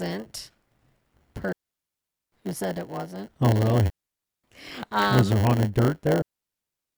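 Throughout the speech there is a block size mismatch (padded): one stage writes shorter blocks than the next reads, so each block ends with a short stretch of zeros. This leaves a buzz at 100 Hz and slows the audio to 0.919 times normal speed, with timbre kept.

A digital wireless dropout occurs three times: 1.53 to 2.32 s, just before "who said it wasn't"; 3.90 to 4.44 s; and from 6.22 s, right after "was there haunted dirt", to the end. Each time the receiver mutes after losing too much data, leaving clean near-silence with no noise burst around it.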